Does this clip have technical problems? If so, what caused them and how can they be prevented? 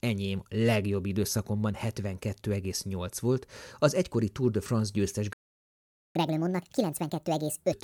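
Yes. At 5.33 s the speech drops to silence for 0.82 s, until 6.15 s. This is a playback stall, likely from the player's buffer running dry or its thread being blocked. A deeper buffer and a higher-priority audio thread would prevent it.

From 6.15 to 7.72 s the speech runs 1.5 times fast and about seven semitones high. This is catch-up at higher speed, with the player resampling its backlog to regain lost time. Resuming at normal speed, or catching up gently with pitch-preserving time-stretching, would prevent it.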